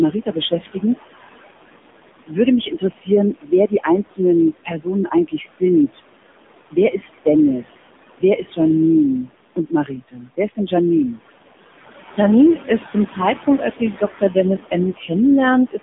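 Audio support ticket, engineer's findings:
Noise suppressor artifacts, throughout: background drops about 20 dB between phrases, then swells under speech. Spectrogram shows gated, blotchy noise floor. Suppressor applying per-band gain frame by frame. Room noise sits about 13 dB below speech.

AMR narrowband mobile codec, throughout: buzzy, synthetic speech with swirling residue; nothing above 3.7 kHz, line band roughly 200 Hz to 3.6 kHz. Spectrogram has a hard ceiling. Damage fits a low AMR-NB mode around 7.4 kbps.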